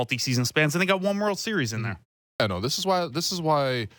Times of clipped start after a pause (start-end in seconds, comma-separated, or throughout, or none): 2.33-2.40